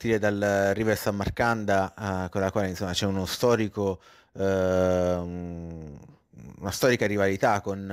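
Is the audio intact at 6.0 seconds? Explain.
No. Sample clock jitter runs through the whole clip, 6.0 s included: an unsteady converter clock of a few microseconds shifts each sample in time, adding a hiss-like roughness about 35 dB below the speech that grows on loud, bright sounds and disappears in pauses.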